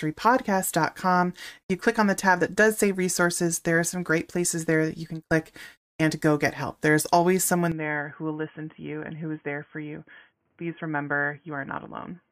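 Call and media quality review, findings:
Input switched to a poorer device at 7.72 s, after "get help there's always": nothing above 3.3 kHz, about 5 dB quieter; likely narrowband mic.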